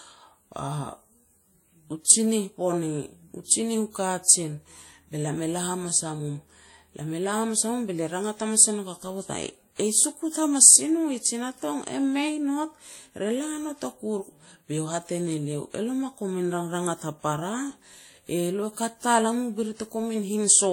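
The speech throughout has likely been through transcoding between lossy codecs: a first encode that sounds like WMA at around 48 kbit/s, then a second pass that fits Vorbis at around 54 kbit/s. The second encoder spends its bits re-coding the first one's damage while adding its own, so both sets of artefacts sit together. Nothing survives above 16.6 kHz.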